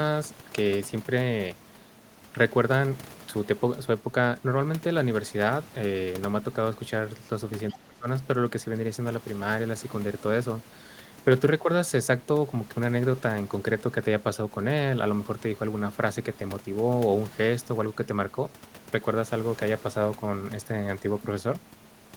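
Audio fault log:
7.69–7.75 s, other side's voice leaking through: a brief scrap of a second voice sits faintly under the speech, about 25 dB down, lasting only 60 ms. The likely cause is loudspeaker playback reaching the microphone and escaping the echo canceller.
7.73–8.06 s, speech suppressed in double talk: right as that scrap appears, the talker's level sinks, dropping by about 20 dB at worst, for roughly a third of a second. The likely cause is the echo canceller meeting overlapping talk and turning everything down together.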